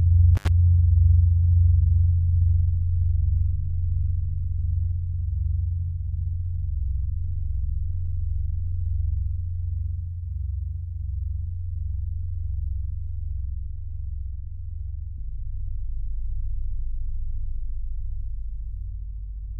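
At 0.35 s the sound cuts out for about 78 ms, with crackle at both edges and faint hiss in the gap, ending by 0.48 s. This is an intermittent contact: a loose cable or plug briefly opened the signal path.

From 2.79 to 4.32 s, 13.30 to 15.91 s, and 18.87 s to the end, the treble turns dull and a gritty grain rises. That fits a Bluetooth SBC bit pool drop from 31 to 11, near 83 kbps, starving the upper sub-bands and coarsening the rest.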